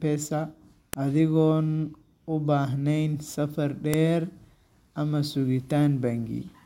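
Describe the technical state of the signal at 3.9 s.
At 3.94 s a file header is played as audio: a joined piece's header bytes are decoded as samples, producing a sharp, loud click regardless of the speech underneath.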